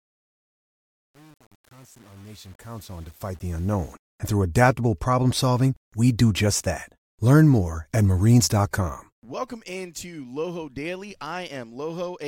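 From the start to about 3.93 s, the speech comes in on a fade-in that suffers from truncation distortion. The fade shape itself is smooth, but the stage doing it drops too many bits without dither, so the quiet part of the ramp turns into coarse square steps. Through about 3.67 s it sounds gritty, which fits roughly 8-bit resolution, before the level is high enough to hide it.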